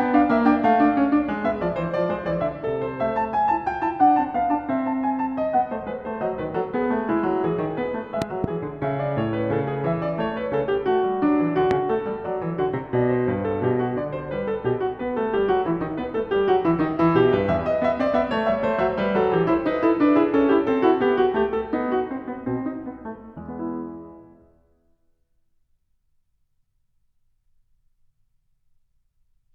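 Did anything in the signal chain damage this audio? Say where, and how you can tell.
Yes. There are loud pops: two in quick succession between 8.22 and 8.46 s, and one at 11.71 to 11.73 s, each peaking about 15 dB above the music, which carries on beneath them. A sudden voltage step, likely from a plug or switch in the analogue wiring, was added to the signal.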